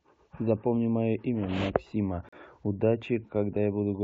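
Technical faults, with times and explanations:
2.29 to 2.33 s, gap between stream segments: the speech stops dead for about 38 ms and resumes just as abruptly, with a clean hole of silence between hard edges. The timing data of two adjacent stream segments leave a short interval unaccounted for, and the player fills that interval with silence. Nothing is lost from the speech itself; the remainder is simply shifted about 38 ms later. The position fits a segment boundary in a stream cut into 2-second segments.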